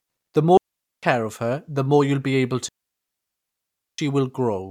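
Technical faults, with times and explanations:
0.57–1.03 s and 2.68–3.98 s, digital wireless dropout: the speech drops into clean near-silence, about 0.45 s just before "of her the more" and a full 1.3 s right after "more you'll be able". The receiver lost too much data and muted with a very short fade, so there's no noise burst.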